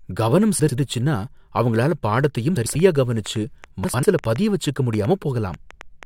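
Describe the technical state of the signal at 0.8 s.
A garbled flutter runs from 0.59 to 0.78 s, just before 0.8 s. This is frames out of order: two adjacent blocks of about 93 ms, which fits four frames each, play swapped, with no time lost.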